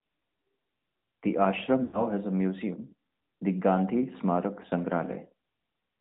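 The whole clip went through the AMR narrowband mobile codec at a rate that points to a mid-range mode of about 10.2 kbps. Nothing above 4 kHz survives, so the speech sounds muffled and boxy, with a plainly audible buzzy, synthetic edge.

From 1.84 to 2.03 s, lost AMR speech frames failed their error check, and the decoder filled the gap of about 100 ms, which fits five 20 ms frames, by repeating the last good settings at falling gain. The sound smears, fades toward silence, then returns roughly just before "has a museum the".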